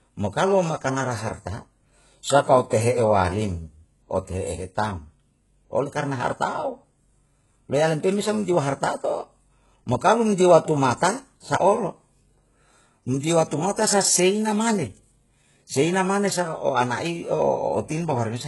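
Throughout, the treble sounds synthetic and lispy, with nothing above 11.5 kHz, likely heavy HE-AAC compression rebuilding the highs by spectral band replication at a very low bitrate, around 12 kbps.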